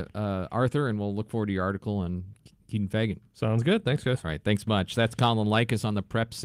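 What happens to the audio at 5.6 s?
Nothing goes wrong at 5.6 s; the speech carries on intact through that moment, with no dropout, click or distortion.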